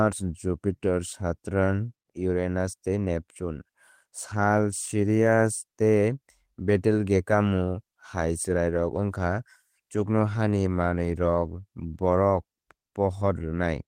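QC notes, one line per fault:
No faults detected in this speech recording.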